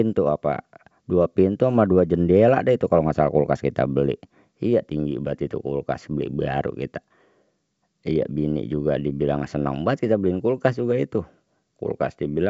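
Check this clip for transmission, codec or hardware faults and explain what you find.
No transmission, codec or hardware faults are audible in the speech: it arrives over G.722 wideband telephone coding at 64 kbit/s, with its band ending near 7.7 kHz as that coding implies and at most a faint trace of the coding itself.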